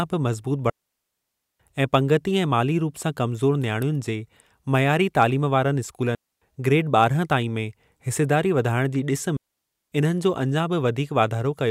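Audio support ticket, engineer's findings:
Digital wireless dropout: RF link losing too much data, receiver muting with a very fast fade. Clean near-silent holes in the speech at 0.70–1.60 s (900 ms), 6.15–6.42 s (270 ms), 9.37–9.92 s (550 ms). No noise burst either side.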